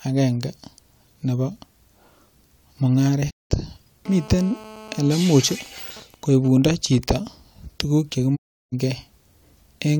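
At 3.29 s a digital broadcast dropout hits: the receiver stops getting good frames and mutes with a quick fade, leaving a hole of about 0.2 s until 3.52 s. From 4.06 to 5.17 s there's GSM phone buzz, where a nearby phone on a call gets rectified into a hard, raspy 217 Hz drone about 20 dB below the speech. It then turns into GSM signalling bursts from 5.18 to 7.11 s, even ticks with a longer buzz twice a second at a similar low level, while the phone's user is silent. A second dropout mutes 8.35 to 8.74 s. At about 0.35 s it's the longer gap, which fits 11 lost frames.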